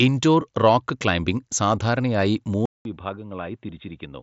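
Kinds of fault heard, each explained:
Input switched to a poorer device: From 2.66 s, just after "ഇൻഡോർ റോക്ക് ക്ലൈംബിംഗ് സാധാരണയായി", the speech stops for about 0.2 s. It then returns duller and boxier, with nothing above 3.8 kHz. Before this, the headset path carried detail up to about 7.7 kHz. The level also falls by about 10 dB, and a faint new noise floor appears. The likely cause is that the system moved its input to a narrower-band device.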